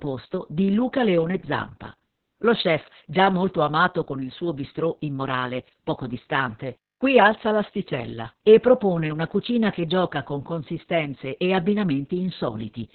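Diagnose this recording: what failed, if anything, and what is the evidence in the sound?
Opus voice compression affects the whole clip, so the failure sits at the codec stage. The speech has nothing above about 4.3 kHz, a narrowband ceiling that muffles consonants. It also sounds hoarse and slightly robotic, which fits the SILK linear-prediction coder running near 6 kbps. At that rate the band is cut to telephone width and the excitation is coded so coarsely that the natural buzz of the voice is replaced by a rough approximation.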